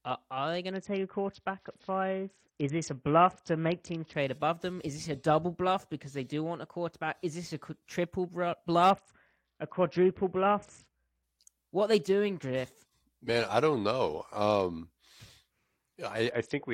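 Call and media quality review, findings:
Bluetooth SBC bit pool drop at 0.71–4.15 s (after "are are they", before "above them"), 8.90–11.23 s, and 16.30 s to end. Dull treble and gritty noise. The sound points to the bit pool cut from about 31 to 6, near 55 kbps.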